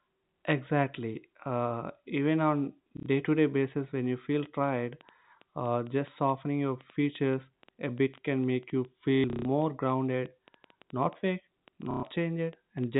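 A telephone-band speech recording, carried over G.711 A-law so nothing above 4 kHz comes through, with two separate problems. First, packet loss with the last packet repeated: the sound stutters robotically at 2.97 s for 90 ms, from 9.15 to 9.45 s where 240 ms goes missing in patches (the longest run is 150 ms), and at 11.91 s for 120 ms. The receiver kept replaying the last packet it had, so the longer runs buzz, which fits 30 ms packets. Second, a train of clicks runs from 4.40 s to the end at 12.96 s: around fifty pops at an uneven pace of about 5.9 per second, peaking roughly as loud as the speech itself and audible in the pauses too. The likely cause is electrical interference or a faulty connection or power supply injecting pulses.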